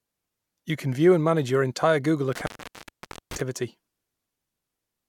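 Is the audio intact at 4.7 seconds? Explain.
Yes, the speech at 4.7 seconds plays through intact, with no dropout, click or other fault at that moment.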